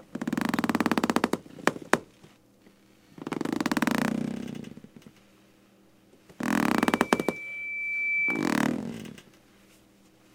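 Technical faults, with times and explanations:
6.74 to 8.60 s, loudspeaker feedback squeal. A 2.3 kHz tone swells over about a second and a half to roughly the level of the other sound. A microphone is picking up its own loudspeaker. At that frequency the loop gain exceeds one, so the tone feeds itself.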